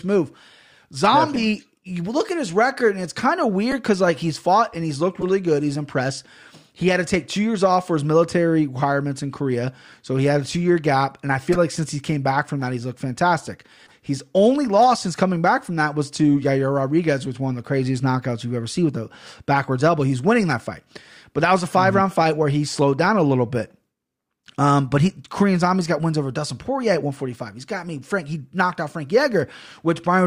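Flipped bits in compressed frames are being decoded as if they were intact. This corrupt frame decoded fault misplaces energy across frequencies for roughly one to a few frames at a time, producing brief chirps and blips. They occur at 1.35–1.38 s, 3.71–3.74 s after "and it's kind of", 5.20–5.23 s after "fought and he's looked", 11.52–11.57 s, 13.86–13.92 s after "that he's looked fantastic", and 20.51 s. Most peak at about -10 to -15 dBFS, but the 13.86 s one is faint, near -40 dBFS.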